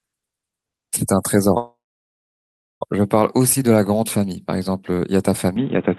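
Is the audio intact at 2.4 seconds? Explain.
No, 2.4 s falls inside a call audio freeze from 1.57 to 2.83 s. The jitter buffer likely ran dry, so the last sound trails off and then goes silent for about a second. The speech then picks up where it stopped, about 1.24 s late, with nothing actually lost.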